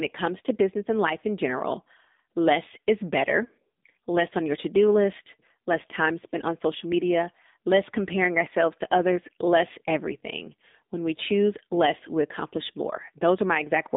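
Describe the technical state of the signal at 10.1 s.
At 10.1 s the speech sounds boxed-in and buzzy, with a plainly synthetic edge. There is no air or sibilant sparkle above about 3.7 kHz, and the low end thins out below about 200 Hz. This is AMR narrowband mobile codec damage, present throughout the clip. The codec rebuilds the voice from a vocal-tract model excited by sparse pulses in 20 ms frames. The plainly audible coarseness fits one of its lower modes, around 7.4 kbps.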